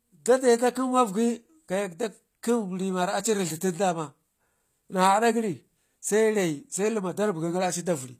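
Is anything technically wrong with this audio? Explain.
Yes. Throughout the speech there is plainly audible damage of the kind HE-AAC compression leaves, likely at a low bitrate around 24 kbps. The treble is rebuilt from copied lower bands rather than coded, so s sounds turn gritty and lispy, and nothing remains above 14.9 kHz.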